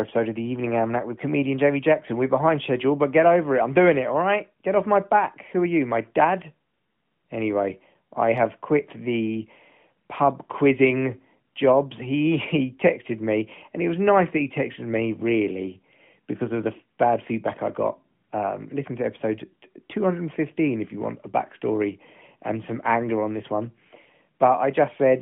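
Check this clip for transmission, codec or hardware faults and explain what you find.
No transmission, codec or hardware faults found; the speech occupies a 150 Hz to 3.4 kHz band with only light coding texture, which fits an AMR narrowband mobile path at its 12.2 kbps mode working as intended.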